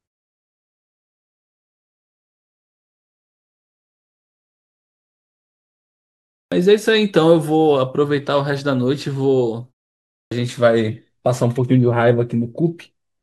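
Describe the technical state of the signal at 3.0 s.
At 3.0 s the speech signal is intact, with no fault in the audio at that moment.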